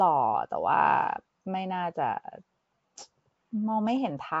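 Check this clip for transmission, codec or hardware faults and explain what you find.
One codec fault runs through the whole clip. Nellymoser compression, throughout: the speech sounds rough, hissy and underwater with nothing above 7.7 kHz, likely from Nellymoser Asao starving weak bands and filling them with noise.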